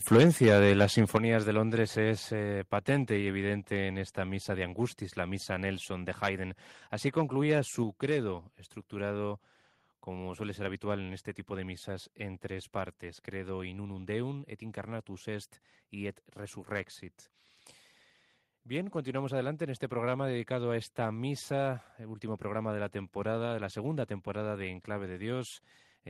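From 0.12 to 1.2 s the speech shows microphone overload. Peaks exceed the converter's limit by about 7 dB, likely from excessive input gain, flattening a few percent of samples into harsh crackle.

At 1.17 s the microphone volume is stepped down by about 8 dB. Voice and background drop together, likely because the call software reduced the input level after clipping.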